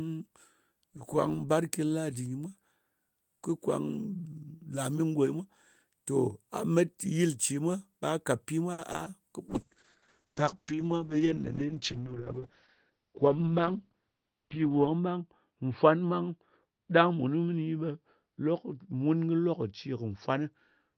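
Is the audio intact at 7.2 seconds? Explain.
Yes, at 7.2 seconds the speech plays through cleanly, with no dropout, click, distortion or other break in the sound.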